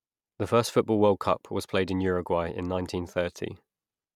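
No technical faults are audible.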